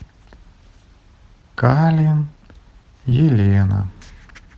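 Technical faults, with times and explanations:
3.09–3.13 s, short concealed packet loss: about 20 ms of audio never arrived in time, so the decoder improvised roughly 15 ms by extending the preceding sound before fading back. The result is a brief smear. On a spectrogram it shows as a short stretch of blurred or repeated harmonics.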